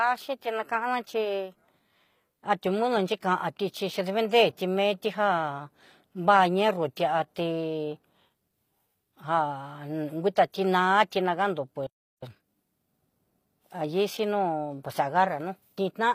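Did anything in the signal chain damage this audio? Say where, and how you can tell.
Yes. HE-AAC compression runs throughout at the codec stage: the damage is plainly audible and nothing remains above 15.4 kHz. The likely cause is a codec that coded only the lower spectrum and rebuilt the treble from copied lower bands, which fits a low bitrate around 24 kbps.

A playback stall silences the sound from 11.87 to 12.23 s, a gap of about 360 ms in mid-flow. At the playback buffer, the player likely ran out of data or was blocked, so output stopped until it recovered.

Time-compressed catch-up follows from 12.23 to 12.57 s, where the audio runs at twice normal speed while keeping its pitch. The player is trimming the backlog left by the stall, cutting out small pieces and cross-fading the remainder.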